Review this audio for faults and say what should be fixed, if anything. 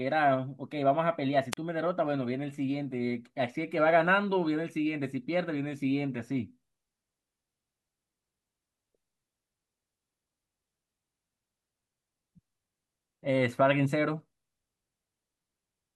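A wireless microphone squelch dropout at 1.52 to 1.57 s: fading RF triggers receiver muting, shown as a brief hiss burst, then a 37 ms flat waveform gap. Fix with better antenna placement, shorter range, or diversity receivers.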